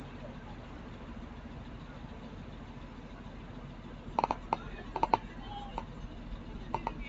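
Throughout the clip, a noise suppressor applied to music or sounds treats sustained tones and ambient tails as noise, pulling them down by around 5 dB while transients pass. Level pumps and thins between onsets, within a call bandwidth capped at 8 kHz.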